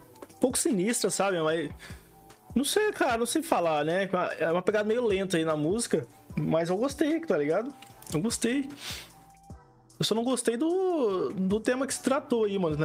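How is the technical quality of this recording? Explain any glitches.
No technical glitches can be heard anywhere in the recording, and the signal stays steady and intact throughout.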